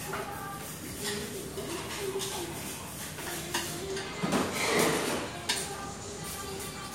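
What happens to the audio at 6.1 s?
Nothing goes wrong at 6.1 s; the audio plays through that moment intact, with no dropout, click or distortion.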